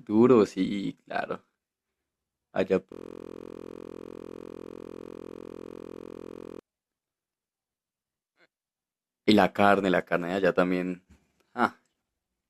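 Speech clip with a system hang loop from 2.92 s to 6.59 s. The machine or its audio driver froze while the hardware kept replaying the same ring buffer, so a single 23.22 ms slice of sound repeats exactly, well over a hundred times in a row. A loop that short doesn't stutter. It fuses into a steady buzz at about 43.1 Hz, the loop rate, and the length fits a 1024-sample buffer.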